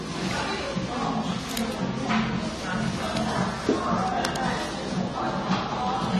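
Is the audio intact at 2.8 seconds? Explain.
No. At 2.8 seconds, as throughout the clip, the sound is dull and smeared, with a warbling, fizzy texture on sustained parts and nothing at all above 13.2 kHz. This is likely AAC compression: the AAC-LC encoder splits each frame into frequency lines and, short of bits, coarsely quantises them against a hearing model, dropping the top band and thinning the rest. The damage is plainly audible and fits a low bitrate around 32 kbps.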